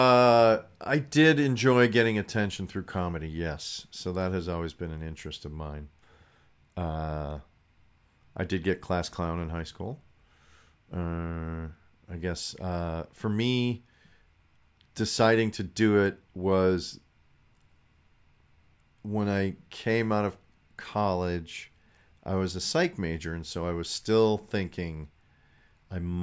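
No technical faults are audible anywhere in the recording.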